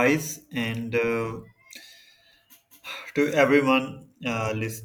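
No technical faults are audible.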